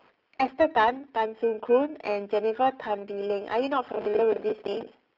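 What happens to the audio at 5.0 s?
At 5.0 s the audio is near the end of a burst of processor overload crackle that runs from 3.89 s to 5.06 s. The processor falls behind and misses the deadlines for dozens of small buffers in a row. Each buffer is around 10 ms long. Each miss replays a stale piece of earlier audio with hard edges. At 5.0 s this is heard as gritty, tearing crackle riding on the speech, and it stops just after this point.

Under that crackle, the G.729 codec is also at work at 5.0 s, as it is through the whole clip. The speech is rebuilt from a vocal tract filter, a pitch predictor and a few pulses per 10 ms frame, at a rate that points to 8 kbit/s. The sound is confined to roughly the 250 Hz to 3.4 kHz telephone band, with nothing above 3.7 kHz. The codec damage is plainly audible as a rough, synthetic quality.

Periodic clock jitter is present at this moment too. The converter's clock is shaken at a single rate of around 2 kHz. 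That places sidebands at that spacing on either side of every component of the speech, strongest on the higher components. The result is a metallic, rough edge on the sound that is present only while there is sound and goes away in silence.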